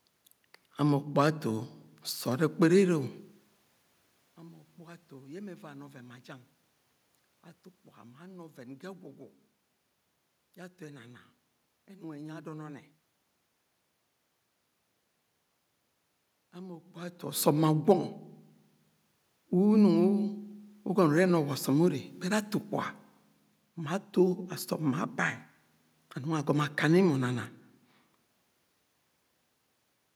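No technical faults are audible; the room noise is part of the recording, and the level changes around 3 s and again near 17 s come from the talker moving relative to the microphone.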